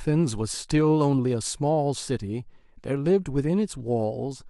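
No technical faults can be heard in this speech recording. Nothing in the audio points to a problem that needs explaining.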